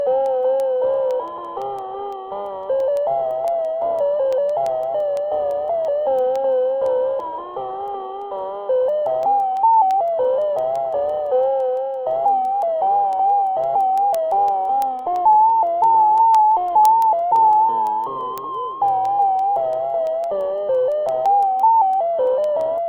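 From 0.26 s to 22.78 s the sounds carry word clock ticks, roughly every 0.15 s: a receiver free-running against its source slips a sample at each drift, about 150 ppm apart. Unlike random dropout clicks, they march at a steady rate, though their strength varies.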